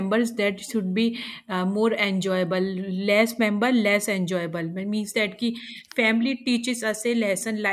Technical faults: none

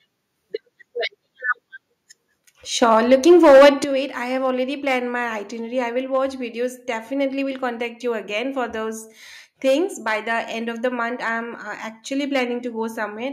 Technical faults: hard clipping; microphone overload; microphone volume stepped down

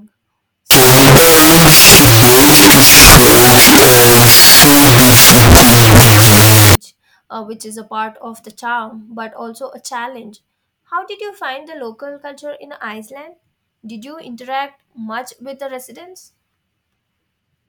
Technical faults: wrong sample width

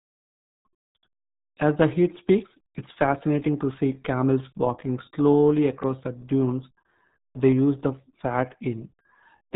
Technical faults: RealAudio 14.4 codec

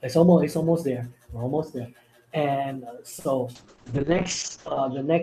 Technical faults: short stall from a late packet; call bitrate drop

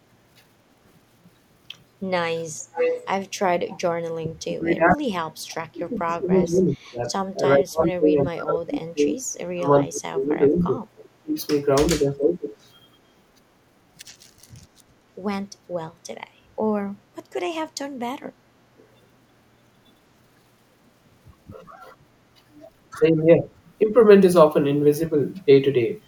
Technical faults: echo leak; speech suppressed in double talk; background gated by the echo canceller

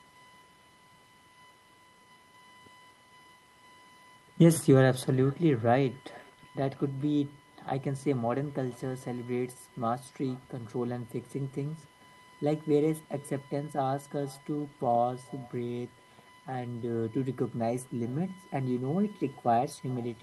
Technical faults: USB whine; echo with no canceller

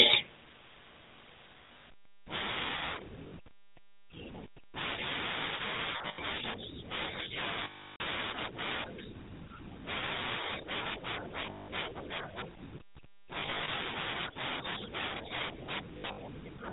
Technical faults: GSM full-rate codec; lost GSM frames

